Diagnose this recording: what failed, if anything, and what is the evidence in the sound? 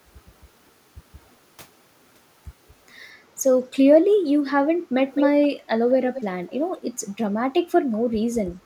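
Call processing failed, producing an echo leak in the speech. Short delayed copies of the voice appear at 5.15–5.26, 5.42–5.49, 6.13–6.22, 6.47–6.57 and 6.77–6.81 s. Each trails the original by 212 ms. The first is nearly as loud as the speech itself. The others are much fainter, and the last is the faintest, about 30 dB below the speech. The likely cause is a far-end loudspeaker feeding its own microphone, with the echo canceller letting scraps of that pickup return.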